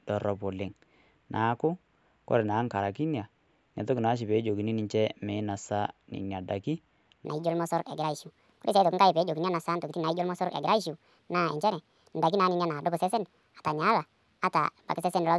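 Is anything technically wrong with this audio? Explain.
Yes. From 7.25 s to the end of the clip there is a wrong sample rate fault. The playback is clocking the samples out faster than they were captured, with no rate conversion, which fits audio recorded at 16 kHz being played at 24 kHz. Everything is scaled by the same 1.5 ratio, so the speech runs 1.5 times too fast and its pitch rises about 7 semitones, making the voice sound high, chipmunk-like and hurried.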